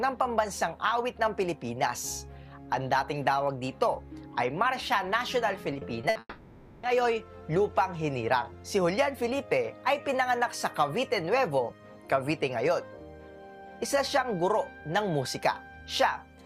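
The audio breaks up between 5.73 and 6.17 s with repeated packet loss, giving a choppy, robotic sound. Four short gaps occur, the longest 60 ms. Each is patched by stretching the previous sound. Those patches fill about 27% of the stretch, 120 ms in total. Right after, from 6.19 to 6.85 s, the sound turns into a fading buzz or hiss that ends in brief silence. This is likely a long network dropout. About 640 ms of audio never arrives. The receiver extends the last sound to cover the hole, and the missing part is skipped when the audio returns.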